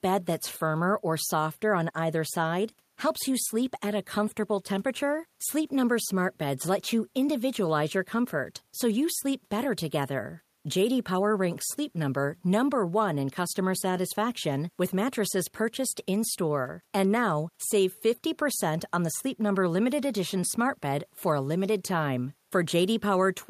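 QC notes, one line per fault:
No faults are heard in this speech clip. The room's own background noise sits about 44 dB below the speech.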